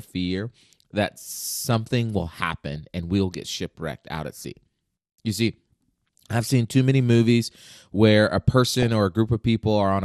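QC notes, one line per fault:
throughout MP2 compression: speech sounds dull with a granular, gurgling edge, likely from MP2 coding at a low rate, around 80 kbps. Upper sub-bands drop out and the rest are coarsely quantised. This is steady, unlike burbling, which comes in bursts.
2.76 s and 8.67–8.88 s DAB burbling: bit errors corrupt sub-band levels frame by frame, giving a brief burst just before "and we'll get shipwrecked" and a longer burst right after "many movies where a". These are transient bursts, not the constant compression dullness.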